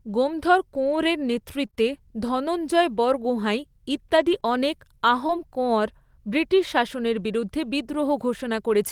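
Between about 0.75 and 5.31 s the speech picks up scattered short gaps, around five small dropouts spread across that stretch, none longer than roughly 20 ms. It sounds like packets went missing or arrived late, and the receiver papered over each hole by stretching the last bit of sound forward. Only a small slice of the span is patched, so it stays clear, but you hear little ticks, smears and hiccups dotted through it.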